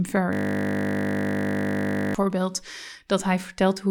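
From 0.33 s to 2.15 s the speech is replaced by a system hang loop. The host or driver stalled while the audio hardware kept replaying the same ring buffer, so one 20 ms slice of sound repeats exactly, about 90 times in a row. Because the loop is so short, it repeats at 50 Hz, which fits a buffer of roughly 20 ms. It is heard as a steady, flat buzz rather than a stutter.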